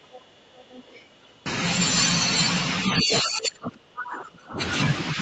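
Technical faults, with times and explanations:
0.0–1.44 s: other side's voice leaking through. A faint second voice sits underneath the speech, roughly 25 dB down, low-level. This is likely loudspeaker echo that the echo canceller did not fully remove from the microphone signal.
3.01–4.6 s: speech suppressed in double talk. The talker's speech dips and breaks up across about one and a half seconds, falling by as much as roughly 30 dB at its deepest. This likely comes from both sides talking at once, with the echo canceller attenuating everything it could not separate.
3.12–3.21 s: other side's voice leaking through. A brief burst of the far-end voice comes through almost as loud as the speech, only about 5 dB below it. This is likely residual echo escaping the canceller during the overlap.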